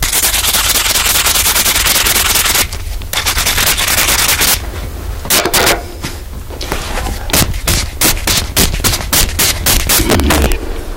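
From start to finish the audio shows integer overflow. The signal was driven about 20 dB too hot, and instead of being limited, peaks past the largest integer wrapped to the opposite sign. A few percent of samples flip this way, producing harsh, violent cracks on the peaks.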